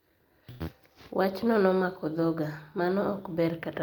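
At 0.51 s the speech hits a short stall from a late packet: the jitter buffer ran dry, so the receiver held the last sound for about 89 ms until 0.61 s, then resumed where it stopped. Nothing is lost, but playback runs 89 ms later afterwards.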